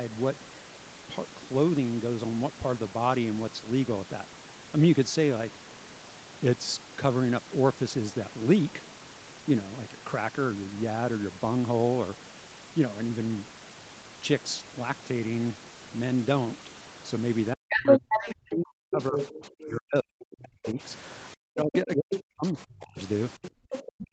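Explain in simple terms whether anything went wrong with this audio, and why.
Yes, two things went wrong near the end of this speech recording.

From 17.52 to 20.79 s, and again from 21.35 s to the end, the talker's voice fades sharply. This is speech suppressed in double talk, likely because the echo canceller muted everything while both sides spoke.

A second voice also comes through, from 17.7 to 19.65 s louder than the talker and from 21.03 to 23.83 s fainter. This is the other side's voice leaking through, likely from the loudspeaker into the microphone.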